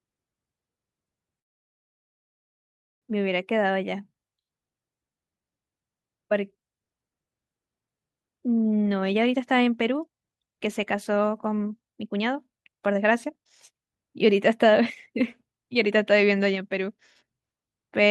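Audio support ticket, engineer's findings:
Call audio freeze, 1.39–3.05 s: sound stops and about 1.62 s of silence fills the gap, then resumes exactly where it left off with nothing lost. Likely packets held in transit, jitter buffer ran empty; playout delay grows 1.62 s.

Jitter buffer speed-up, 8.79–17.38 s: speech runs at 119% speed, pitch unchanged, sounds hurried. Receiver trimming short pitch-period slices in succession to drain excess buffered audio; roughly one and a half seconds removed, pulling delay back down.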